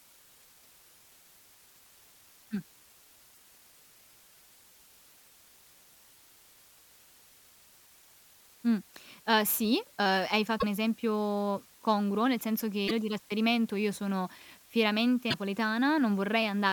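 A constant, even hiss sits under the speech for the whole clip, roughly 30 dB below it, with no distortion on the speech. This is low bit depth with dither: noise added before coarse rounding turns the quantisation error into steady white noise, which fits an 8-bit signal.

Short glitches from damaged data in a compressed stream occur at 3.31 to 3.37 s, at 10.57 to 10.64 s just before "esempio congruo nel senso", at 12.84 to 12.91 s between "esempio congruo nel senso" and "di trasferimento io sono", and at 15.27 to 15.34 s. Each lasts about 70 ms. Corrupted frames are misdecoded while the decoder loses sync and searches for the next valid header.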